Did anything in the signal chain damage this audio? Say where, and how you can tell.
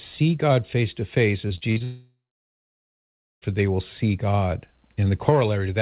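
Yes. From 1.48 to 1.82 s the network dropped packets repeatedly: four short holes, the longest 40 ms, patched by repeating the last sound, so the stretch sounds choppy and robotic.

Right after, from 1.84 to 3.44 s, the sound smears into a fading continuation, then goes silent for about 1.27 s before returning. That's likely a long network dropout.

Throughout, the G.711 A-law call codec leaves nothing above 4 kHz.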